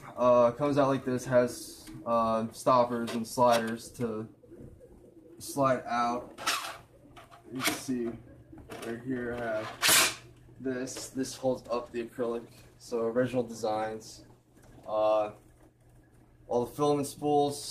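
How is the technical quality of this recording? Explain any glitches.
One glitch stands out. From 10.64 s to the end, a call bitrate drop takes the encoding from 48 kbps to 13 kbps. Coarser coding and lost high frequencies make the sound rough, watery or muffled, with no recovery.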